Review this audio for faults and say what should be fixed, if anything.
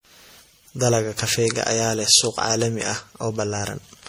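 Generation loss runs through the whole speech clip. The sound is swirly, smeared and hollow, with blurred attacks, likely from about seven MP3 re-encodes at a rate pointing to 64 kbit/s, each requantising on a shifted frame grid. A spectrogram shows patchy holes, smeared transients and nothing above 20.6 kHz. Keep a lossless master and encode to MP3 only once, as the final step.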